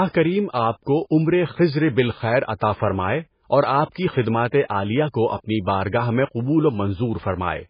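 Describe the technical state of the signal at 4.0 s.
Pre-echo at 3.94 s, just before 4.0 s: a hiss about 17 ms long leads into a sharp speech onset. The codec spread its quantisation noise across the whole block, so noise meant for the loud attack leaks into the quiet moment before it, softening and smearing the onset.

MP3 compression is heavy throughout, including this moment. Nothing is heard above 5 kHz, and weak spectral detail flickers with a watery, swirly quality, which fits a very low bitrate of around 16 kbps. That is likely an MP3 encoder starving its bands of bits.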